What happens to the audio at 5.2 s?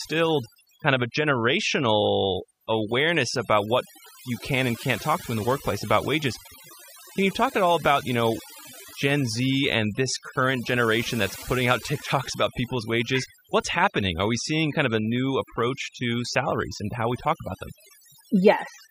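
Mains buzz runs from 1.39 s, just after "kind of a", to the end: 50 Hz switching spikes and their harmonics make a steady, raspy buzz well below the speech. Overdone noise removal is also present throughout: bands near the noise estimate are cut away, leaving near-silent gaps with twinkling specks.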